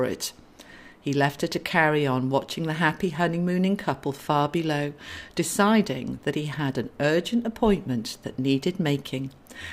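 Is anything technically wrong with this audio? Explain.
No, no technical faults heard.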